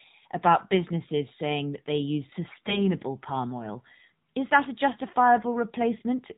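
It's a speech clip squeezed through the AMR narrowband mobile codec. Nothing gets through above 4 kHz, and the voice has that buzzy, synthetic edge that fits one of the lower AMR-NB modes, somewhere around 7.4 kbps, so the codec damage is easy to hear the whole way through. Then from about 2.5 to 2.9 s you get AMR bit errors: the voice stays at roughly the same pitch and loudness but goes hoarse, scratchy and gargly. That's what happens when the weakly protected bits arrive flipped at something like one in ten, which scatters the excitation pulses and nudges the pitch, gain and spectral detail off. The span fits about ten damaged 20 ms frames.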